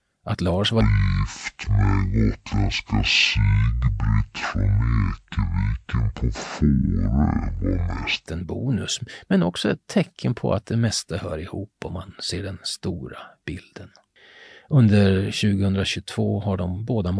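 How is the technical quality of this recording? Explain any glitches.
The recording has one clear glitch, a wrong sample rate fault. From 0.81 s to 8.27 s, the speech plays at half speed and drops a full octave, 12 semitones down. The samples are being read out at a slower rate than they were captured, with no conversion. That fits 44.1 kHz audio played at about 22 kHz. Speed and pitch fall together. The voice sounds deep, slow and dragged. Normal speed returns just before "en bonus men också".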